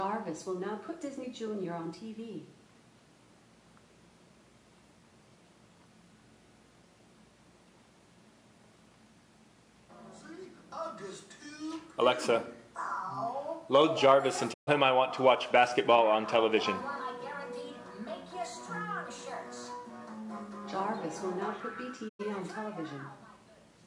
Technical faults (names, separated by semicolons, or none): digital broadcast dropout